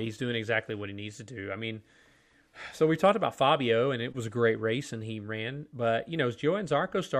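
Nothing in the recording points to a technical problem anywhere along its length.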